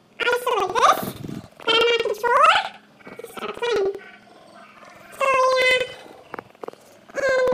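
Planar audio read as interleaved runs throughout the clip. Each block stores all of one channel's samples followed by the other's, but playback treats them as alternating left-right pairs, so every block plays twice at double speed, first the left half and then the right. The blocks last about 93 ms, which fits 4096-sample blocks. The sound is shifted up a full octave and carries a flutter repeating at about 10.8 Hz, while the overall pace stays correct.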